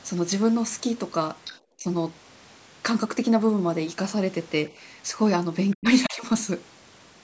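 At 1.45 to 1.58 s a faint second voice leaks through, sitting roughly 15 dB under the talker. This is the other side's voice leaking through, likely because the loudspeaker playback was not fully cancelled. What sets it apart from a dropout is that something is added rather than taken away. Right after, at 1.77 to 1.86 s, the talker's own voice is pushed down by about 15 dB for roughly a tenth of a second. That is speech suppressed in double talk, likely the echo canceller turning everything down when both sides overlapped. It differs from network loss because the level dips rather than the sound breaking off cleanly. At 5.71 to 6.17 s the leak returns more faintly, around 25 dB down and sustained for nearly half a second. Overlapping it the talker dips twice: hard, by about 40 dB, at 5.76 to 5.85 s, then by about 20 dB for roughly 0.2 s at 6.06 to 6.26 s. The band ending at 8 kHz belongs to the normal call processing.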